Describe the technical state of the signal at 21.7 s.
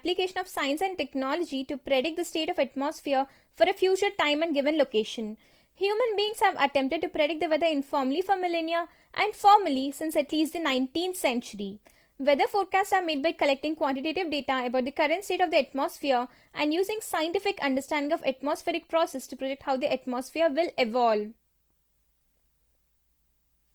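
At 21.7 s the speech carries Opus compression damage, present across the whole clip rather than at that instant alone. Band energies are kept, but the finer detail inside each band is filled in from folded lower bands or noise. So instead of swirling holes, the speech turns grainy, rough and noisy, plainly audible here. The spectrum still reaches about 20.2 kHz, which points to full bandwidth in the music-style mode, likely at a rate around 24 kbps.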